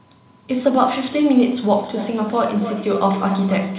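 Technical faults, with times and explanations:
1.77–3.78 s, feedback echo between two devices: a second device in the room replays the call and this microphone picks it up again, which its echo canceller cannot remove. Copies return roughly every 0.3 s, peaking about 12 dB below the speech, showing as evenly spaced repeats of each syllable's energy, all below 4 kHz like the call audio.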